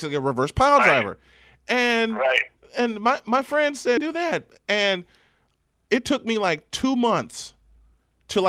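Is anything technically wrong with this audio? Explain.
Yes. At 3.97 s the speech skips ahead: roughly a second of audio is missing, and the two sides are butted together with no filler. A jitter buffer that overflowed or lost a stretch in transit dropped it and jumped to newer audio that was already waiting, cutting the delay by about a second. You hear an abrupt lurch forward. On a spectrogram the harmonic tracks break at one vertical seam, and the waveform shows a hard splice with no silent gap.

Jitter buffer speed-up follows, from 4.57 to 5.55 s and again from 5.99 to 7.07 s. Both stretches play at about 106 % speed, with roughly 70 ms removed from each. The buffer was holding more than its target, so the receiver trimmed short pitch-period pieces over and over to drain it. The pitch stays the same, but the delivery sounds slightly rushed. A spectrogram shows the formant patterns compressed in time with unchanged harmonic spacing, and the waveform shows the pitch cycles with small pieces cut out.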